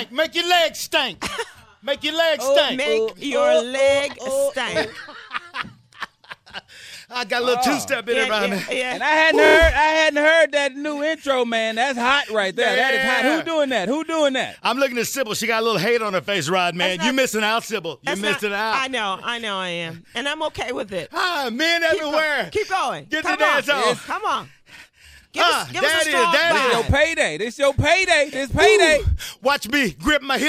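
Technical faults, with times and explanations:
9.45 s, 23.32 s and 24.75 s: repeated frames. A 26.1 ms block, which fits one MP3 frame, replays four extra times at 9.45 s, adding 104.5 ms of stutter. It replays once at 23.32 s, and a 52.2 ms pair replays once at 24.75 s.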